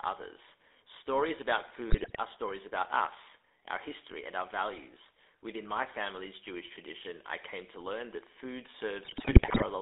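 Speech runs through the GSM full-rate codec throughout, with the band held to roughly 300 Hz to 3.6 kHz, which fits a 13 kbps stream. Its gravelly, buzzy roughness sets it apart from plain band-limiting. GSM bit errors at 1.9 to 2.21 s and 9.04 to 9.64 s break the sound into squawks, pops and gargling. Unlike dropouts, these corrupted frames produce sudden level blow-ups and bent spectra rather than gaps.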